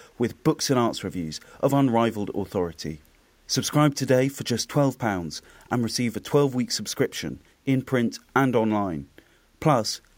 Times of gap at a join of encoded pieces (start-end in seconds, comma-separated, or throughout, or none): none